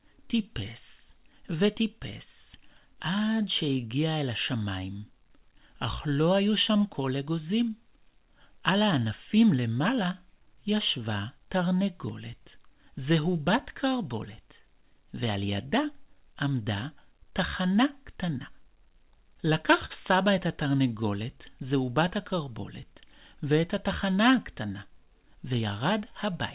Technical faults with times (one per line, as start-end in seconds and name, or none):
0.00-26.54 clock drift between sender and receiver
0.20-26.33 repeated timing corrections
19.86-19.92 short stall from a late packet